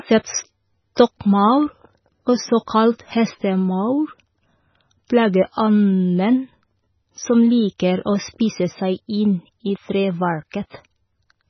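Throughout, the speech sounds watery and swirly, likely from heavy MP3 compression at a very low bitrate. The spectrogram shows nothing above 6 kHz and flickering gaps between harmonics.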